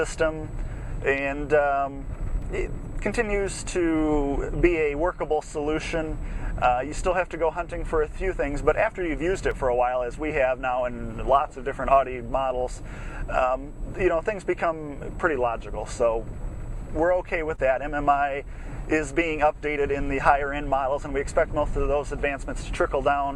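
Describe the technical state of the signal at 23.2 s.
At 23.2 s the signal is intact, with no audible fault at that moment.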